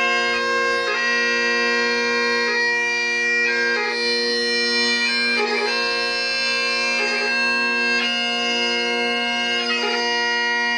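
The audio is likely captured twice, producing a doubled audio track throughout: a dry, full-band copy trails about 1.5 s behind, roughly 5 dB quieter.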